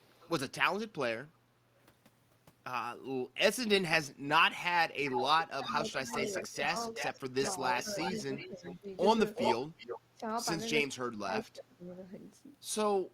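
From 0.0 to 0.3 s there is a faint echo leak, a delayed copy about 30 dB below the speech and 418 ms late. A loudspeaker echo likely slipped past the far end's echo canceller.

From 5.07 to 8.75 s the echo leak returns louder, about 10 dB down, with a 372 ms delay. Overlapping that stretch the speech suppressed in double talk dips by roughly 10 dB, from 5.57 to 6.74 s and from 7.57 to 8.88 s. The canceller likely confused the talker with the echo and turned both down.

From 9.35 to 9.99 s the echo comes back at about the speech's own level, again 372 ms late.

Speech drops briefly from 10.15 to 10.23 s, by about 10 dB. From 10.83 to 11.84 s it drops harder, by about 20 dB.

From 11.91 to 11.95 s there is a last faint scrap of echo, about 40 dB down.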